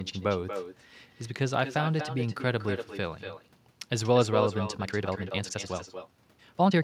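Throughout this speech clip every phrase is trailed by a thinner copy about a fifth of a second later and about 9 dB down: echo with no canceller, where the far end's loudspeaker feeds its microphone unchecked. From 4.77 s to the end the pace suddenly jumps to 1.9 times normal with unchanged pitch, sounding rushed, likely a time-stretched section squeezed by dropping short slices.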